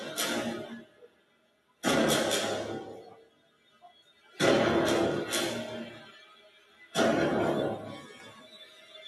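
A noise suppressor designed for speech is applied to music or sounds throughout, and it treats sustained and ambient parts of the audio as noise. Its gain swings by about 20 dB as it decides what to keep. Onsets pass while anything steady or decaying gets pulled down, so the sound pumps and thins, with tails sinking away instead of ringing out naturally.

The sound is cut by the noise suppressor in four stretches, each roughly a second long. From 0.8 to 1.83 s the level drops by about 13 dB. From 3.14 to 4.39 s it drops by about 13 dB again, the longest stretch. From 6.13 to 6.95 s it dips by about 12 dB. From 8.1 s to the end at 9.07 s it falls by about 9 dB. In each stretch, held material sags and decays are clipped short while sharper attacks survive.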